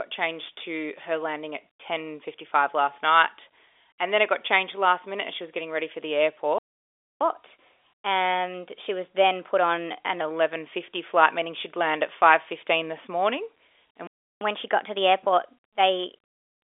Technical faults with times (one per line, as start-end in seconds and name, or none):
6.58-7.21 playback stall
7.21-10.21 catch-up at higher speed
14.07-14.41 playback stall
14.41-16.64 catch-up at higher speed